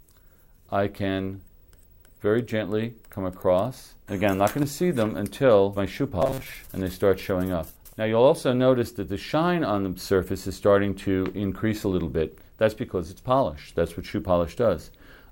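For a short stretch from about 6.22 to 6.53 s, the audio turns into robotic sound from repeated short buffers: a rigid, metallic buzz at 133 Hz, with most of that stretch made of repeats. That's likely a tiny chunk of about 7.5 ms being looped while fresh audio got skipped.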